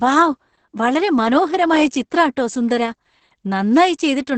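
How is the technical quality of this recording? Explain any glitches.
Pretty rough, honestly. The whole clip carries heavy Opus voice compression: the speech sounds muffled, a bit hoarse and faintly robotic, with nothing above about 8.9 kHz. That fits the linear-prediction voice mode squeezed to around 10 kbps, coding the excitation coarsely.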